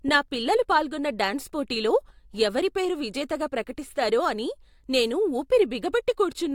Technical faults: none

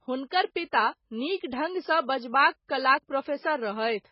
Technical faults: MP3 compression

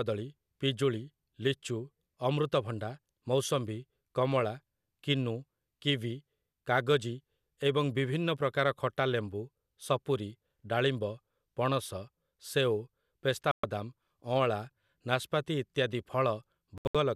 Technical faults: digital broadcast dropout

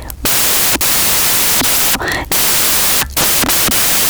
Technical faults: samples built from the wrong bytes

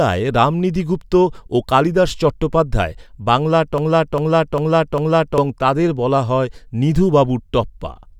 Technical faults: broken-record loop

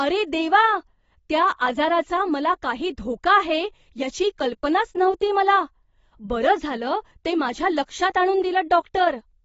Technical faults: AAC compression

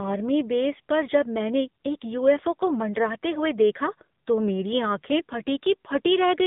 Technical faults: AMR narrowband mobile codec

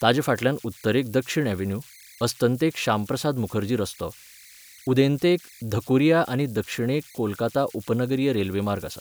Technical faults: converter idle tones

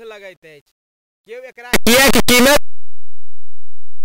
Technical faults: signed and unsigned mixed up

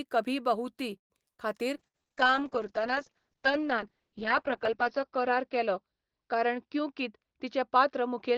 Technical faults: call audio freeze; skip ahead; short concealed packet loss; jitter buffer slow-down; call bitrate drop; burst of packet loss; jitter buffer speed-up

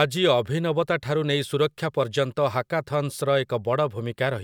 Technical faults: none

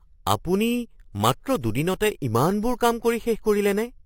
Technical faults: imaging from sample-and-hold upsampling

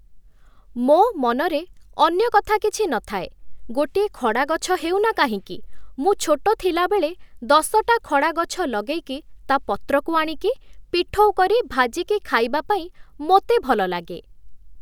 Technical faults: none

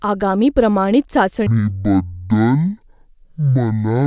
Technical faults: wrong sample rate

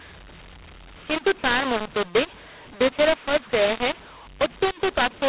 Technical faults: mu-law and A-law mixed up

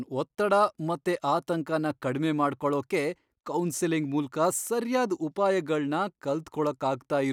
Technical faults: dropped samples

